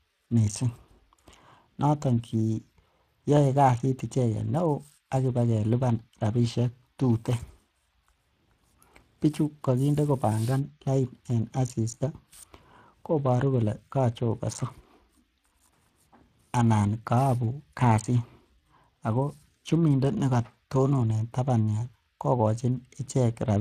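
From start to finish the speech carries Speex codec damage, and it's plainly audible: a hoarse, grainy edge where the CELP excitation runs short of bits. It fits a bitrate somewhere near 22 kbps, and there's nothing at all above 15.3 kHz.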